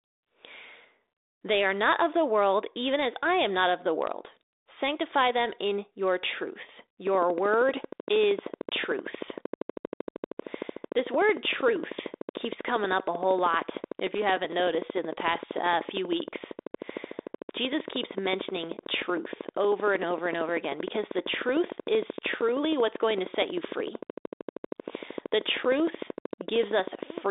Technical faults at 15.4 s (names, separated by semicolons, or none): train of clicks